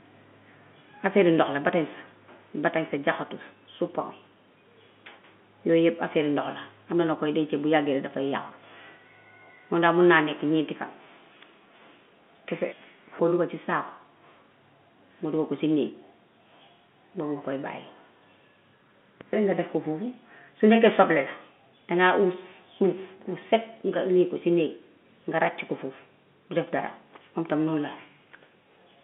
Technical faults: none

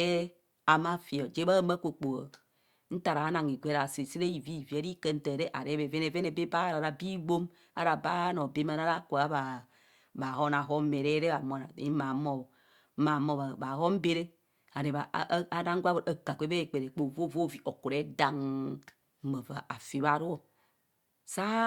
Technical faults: none

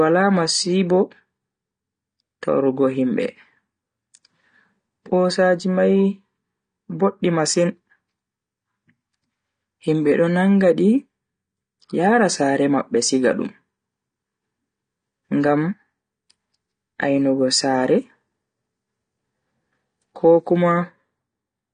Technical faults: AAC compression

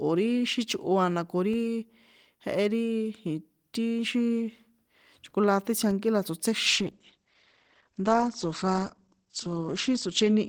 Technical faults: DC step; call bitrate drop

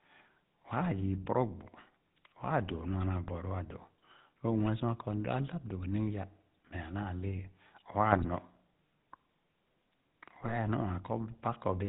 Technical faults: GSM full-rate codec; GSM bit errors

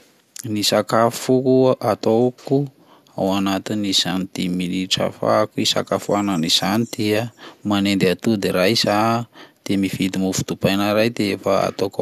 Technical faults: none

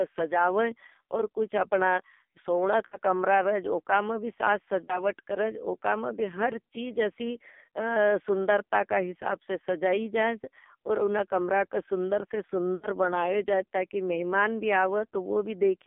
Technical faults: AMR narrowband mobile codec; lost AMR speech frames

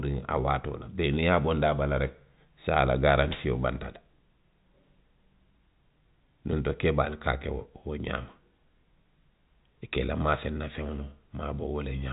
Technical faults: none

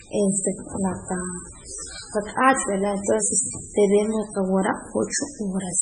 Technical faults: MP3 compression

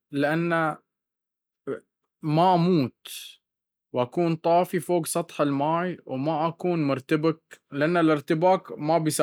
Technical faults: none

